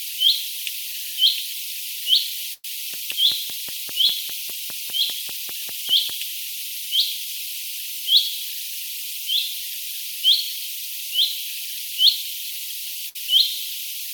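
At 2.53 s a burst of packet loss leaves about 100 ms of audio missing. The receiver stretches the last received sound across roughly 103 ms, fading it so it thins to a held buzz or hiss before about 20 ms of silence. The audio then resumes further on. A second burst at 13.09–13.16 s conceals about 60 ms the same way. On a spectrogram each appears as smeared, repeating bands that dim, and the waveform shows a decaying envelope, then an abrupt restart.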